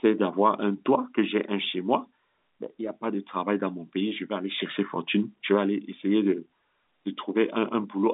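No technical faults turn up anywhere in this speech recording. It comes through the G.711 telephone coding path, which limits the sound to roughly the 200 Hz to 3.7 kHz telephone band and leaves at most a faint trace of its own.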